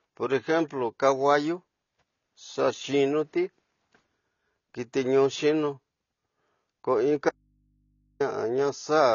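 From the start the speech sounds dull and smeared, with nothing above 6.9 kHz and a fizzy, warbling edge on sibilants and held vowels. This is plainly audible AAC compression, likely from AAC-LC coding at a low rate, which fits a bitrate around 24 kbps. At that rate the encoder lowers its cut-off and quantises the frequency lines too coarsely to follow the signal, so it leaves gaps in the spectrum or fills bands with stand-in noise.

From 7.29 s to 8.20 s the speech cuts out abruptly for about 0.91 s. The gap holds only a low mains hum, roughly 45 dB below the normal level, and then the speech snaps back. This is an audio dropout to a faint residue. The wanted signal was likely lost while the path after the break stayed live, so what fills the gap is hum from the open input rather than silence, a pause or a fade.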